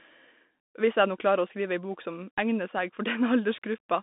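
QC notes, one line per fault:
Throughout: Bluetooth CVSD headset codec. The speech is confined to roughly 200 Hz to 3.6 kHz, with plainly audible codec damage: a granular hiss, scratchy sibilants and slope-overload distortion where the one-bit delta stream cannot keep pace, consistent with a 64 kbps CVSD link.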